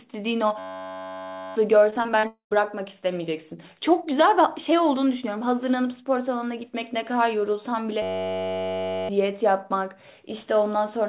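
A speech clip that came through a narrowband call path, with nothing above 4 kHz, which fits G.711 A-law. It has three kinds of fault. The first is a system hang loop, twice, from 0.59 to 1.56 s and from 8.02 to 9.09 s. Each time the same 10.67 ms slice repeats over and over, producing a steady buzz at about 93.8 Hz. That fits a 512-sample ring buffer cycling while the machine froze, and roughly a second of real audio is lost at each spot. The second is repeated packet loss, giving a robotic sound from 1.9 to 2.57 s. Seven gaps, the longest 40 ms, get patched by stretching the last sound, so it turns choppy with about 120 ms of audio missing. The third sits inside that stretch, from 2.27 to 2.53 s. The sound smears into a fading tail and then goes silent for about 110 ms, with about 240 ms never arriving, most likely a long network dropout.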